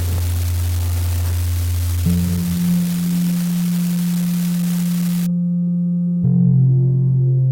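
A recording of everyday sounds carries an unreliable data bit from the start to 5.26 s. A constant crackle and fizz sits over everything in that span and continues through the quieter gaps, where it is most exposed. It comes from one marginal data line flipping its bit in a random share of samples. Each error jumps the waveform by the same fixed step, about -16 dBFS, so the clicks all land at one level. The crackle stops at 5.26 s.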